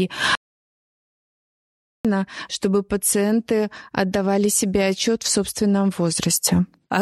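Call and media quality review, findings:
Audio dropout to silence, 0.35 to 2.05 s. Speech cuts out mid-flow and returns abruptly; about 1.7 s lost entirely, no room tone in the gap. Waveform: flat line between hard edges. Spectrogram: fully blank column, no noise floor. Component: capture input, likely a dropped device link or momentary mute while the recorder kept writing zeros. Content spoken in the gap is unrecoverable.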